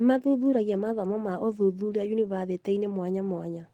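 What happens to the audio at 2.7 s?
Nothing goes wrong at 2.7 s; the audio is intact at that moment.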